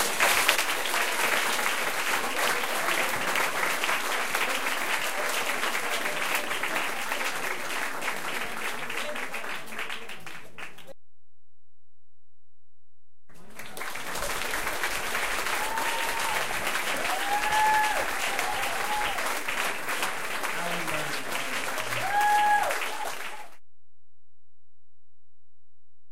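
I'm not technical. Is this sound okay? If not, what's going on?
No. You won't hear anything odd, but from start to end the waveform sits off-centre, a DC offset, which wastes volume headroom and adds inaudible rumble-level energy.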